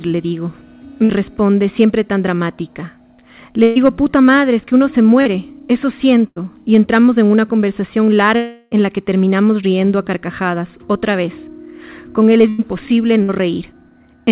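At 1.04, 3.63, 6.27, 12.49 and 13.23 s there are bursts of packet loss. The receiver bridged gaps of 53 to 122 ms by extending the last sound as a fading buzz or hiss. Then 60 to 120 ms of audio is skipped.

At 5.22 s a short concealed packet loss patches a 38 ms hole with a synthesized continuation, leaving a brief smear where 40 ms went missing.

From 8.36 to 8.73 s the last sound is extended for 351 ms and fades without dropping to silence. When the audio resumes, 360 ms is gone. A long network dropout is the likely cause.

The call path band-limits everything to 4 kHz, consistent with G.711 mu-law at 64 kbps.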